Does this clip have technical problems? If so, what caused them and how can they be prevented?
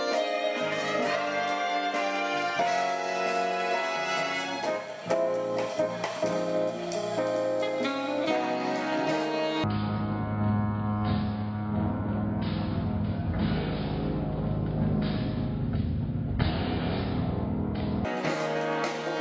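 Yes. From 9.64 to 18.05 s the sound drops about 19 semitones and slows to a third of its speed. This is a wrong sample rate, which fits 48 kHz audio played at 16 kHz without conversion. To prevent it, match the playback rate to the recording rate or resample before playback.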